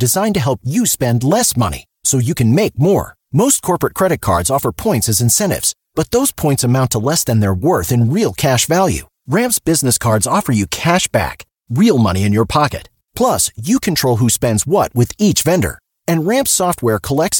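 Nothing stood out on listening to this speech recording.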